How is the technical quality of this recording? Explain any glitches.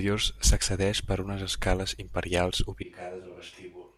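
One glitch stands out. At 2.83 s, right after "per unes escales imperials", the sound turns roomy and hollow, drops roughly 10 dB with thinner bass, and gains audible room noise until the end. This is likely a switch to a distant microphone after the close one dropped out.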